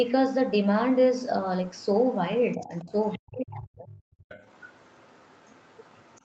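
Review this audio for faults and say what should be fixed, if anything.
Faint traces of the other side's voice leaking through appear at 0.03–0.11 s, 1.74–1.98 s, 2.51–3.19 s, and from 4.21 s to the end. They are very quiet, around 35 dB below the talker in the first two spots, about 25 dB below in the third, and about 30 dB below in the last long stretch. The likely cause is an echo canceller that left some of the loudspeaker signal in the microphone feed. On a spectrogram this shows as weak, separate harmonic traces under the main voice. Above an 8 kHz ceiling there is nothing, which fits the call's band limit. Better acoustic coupling control, such as headset use or a retrained canceller, would prevent this.

The talker's voice is also suppressed in double talk. From 2.56 to 2.92 s it dips by roughly 10 dB while the stronger leak runs underneath. From 3.18 to 3.97 s it drops far deeper, around 40 dB, almost to silence. 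This is likely the canceller failing to separate near speech from echo and muting both. On a waveform the envelope visibly caves in. On a spectrogram the harmonics fade or vanish in those spans. A double-talk detector tuned to favour the local talker would keep the voice intact.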